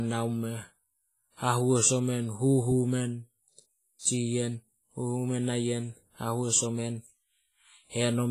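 Throughout the speech, WMA compression is audible as heavy codec damage: ringing, washy smearing and hiss breathing with the signal, likely from a low bitrate around 24 kbps. A spectrogram shows nothing above 15.3 kHz, with weak components zeroed into gaps.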